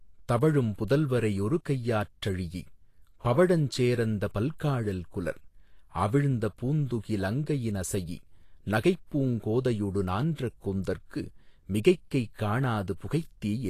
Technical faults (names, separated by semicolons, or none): Vorbis compression